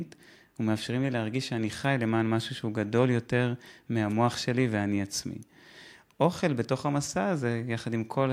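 No technical faults occur at any point in the recording, so there is nothing to describe in time order.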